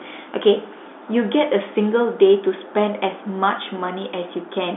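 Speech over G.711 telephone coding with a line band of roughly 250 Hz to 3.6 kHz; no faults.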